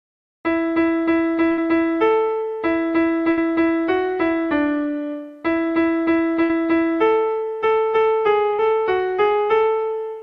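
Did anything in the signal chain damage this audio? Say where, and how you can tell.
Yes. Burst of packet loss on the network at 1.51, 3.31, 6.43 and 8.53 s: each time the receiver stretches and fades the last sound for about 60 ms, then skips ahead past the lost stretch.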